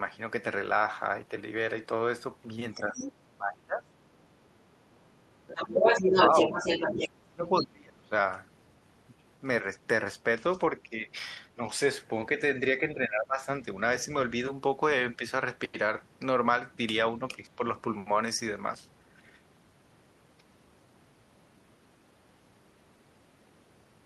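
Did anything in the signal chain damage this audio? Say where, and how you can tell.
Yes. A second, fainter voice comes through from 2.73 to 3.13 s at about 10 dB below the main talker, then returns from 5.47 to 7.06 s, this time about 5 dB louder than the talker. This is the other side's voice leaking through. It is likely a call-processing fault: the far end plays on the talker's loudspeaker, reaches the microphone, and the echo canceller fails to subtract it fully.

The talker's own speech also sinks at several points, which is speech suppressed in double talk. It dips by about 25 dB from 2.74 to 3.94 s and about 30 dB from 6.92 to 8.14 s, about 20 dB from 12.8 to 13.47 s, and about 5 dB at 10.83 to 11.6, 15.16 to 15.24 and 17.45 to 17.61 s. The likely cause is the echo canceller treating simultaneous talk as echo and attenuating everything.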